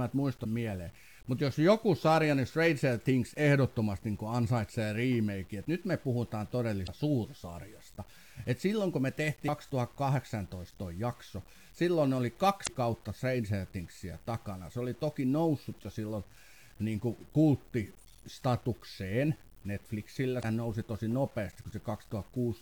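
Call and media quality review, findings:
Low bit depth without dither, throughout the speech: gritty, signal-following distortion, worst on quiet syllables and decays, with the softest passages sputtering or dropping out. Likely component: a quantisation stage truncating to about 8 bits with no dither, so the rounding error tracks the signal instead of sitting as a steady hiss. Error sits roughly 30 dB below the speech.

Damaged data in a compressed stream, five short bursts: 0.41–0.46 s, 6.83–6.89 s, 9.45–9.49 s, 12.63–12.69 s, 20.39–20.45 s. Each is a chirp, squawk, click or short hole of about 45–55 ms. Probable component: decoder hitting corrupted frames, losing sync and resyncing at the next frame header.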